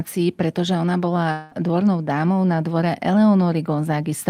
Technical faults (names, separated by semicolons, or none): long network dropout